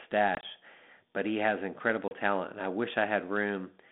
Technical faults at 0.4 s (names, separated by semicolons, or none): packet loss on an ADPCM call